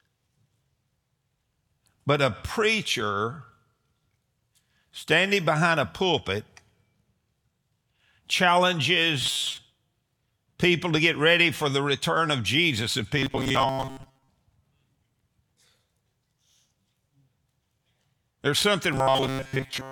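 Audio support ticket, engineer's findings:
Rigid metallic buzz at a fixed 133 Hz, sound only loosely tracking underneath: 9.21–9.58 s, 13.18–14.29 s, 18.93–19.92 s. Robotic sound from repeated short buffers, likely in the playback/jitter buffer stage. Input starved, so the last ~7.5 ms chunk loops in place of new audio. Most of the material in each span repeated rather than real. Loop period sets the 133 Hz pitch.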